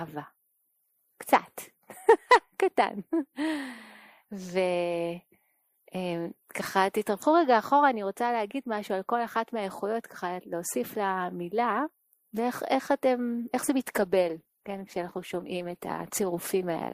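At 13.80 s the quality drops abruptly and stays down through to the end. That's an adaptive stream at a lower bitrate: the player switched to a cheaper version, most likely because the connection slowed. There's no gap at the switch, just a sudden drop in quality, with codec artefacts creeping in, which fits a step from roughly 64 down to 16 kbit/s Opus.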